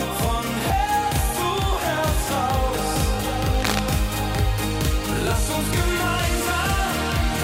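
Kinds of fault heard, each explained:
Cable scratch noise: From 3.54 to 3.80 s, a dense, uneven burst of scratching and rustling sits over the sound, only a little below the main signal level. It likely comes from a worn cable, connector or control being moved, rapidly varying its contact resistance.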